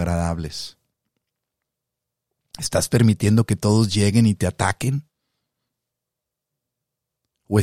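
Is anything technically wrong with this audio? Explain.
No, nothing technically wrong can be heard here.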